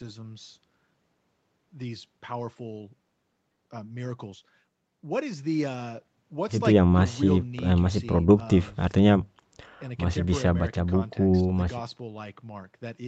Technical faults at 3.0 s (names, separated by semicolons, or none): none